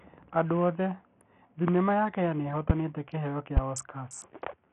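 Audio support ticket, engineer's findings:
Gritty, coarse speech throughout, treble thin and flickering, nothing above 11.9 kHz, grainy noise riding the sound. Likely Bluetooth SBC compression with a starved bit pool, somewhere near 48 kbps: upper sub-bands get few or no bits, the rest are coarsely quantised.

Three sharp pops over the speech, at 1.68–1.71 s, 2.70–2.73 s and 3.57–3.60 s; the first and last about 20 dB above the speech, the middle about 15 dB. Loud pop, likely voltage steps from a switch, connector, static or driver glitch.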